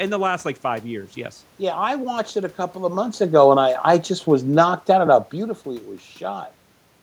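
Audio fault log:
3.23–5.35 s, automatic gain falling: after "a couple of months" the level eases down by about 3 dB until "it was", with the room noise sinking along with the speech, because the gain control judged the input too loud, or its background noise too strong, and lowered its gain gradually.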